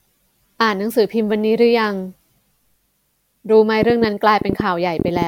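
From 3.83 s to 5.23 s, a train of clicks runs over the speech: around fifteen short, similarly shaped pulses arriving at roughly 8.6 per second, with uneven spacing between them. They peak about 15 dB above the surrounding signal, so they read as a distinct ticking or popping that sits on top of the speech and stays audible through any gaps. The likely cause is interference from nearby equipment or a faulty connection or power supply injecting repeated transients.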